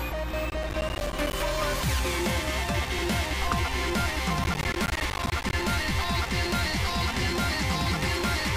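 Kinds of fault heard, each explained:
Processor overload crackle: the processor falls behind on short audio blocks, each around ten milliseconds, and each missed block becomes a sliver of silence with hard edges. Two bursts occur, from 0.5 to 1.33 s and from 4.44 to 5.53 s, made of about 20 and 30 tiny gaps respectively, heard as gritty tearing over the sound. A single dropout is one clean hole, but this is a dense cluster of holes. Clipping grows with loudness, but this follows processing load.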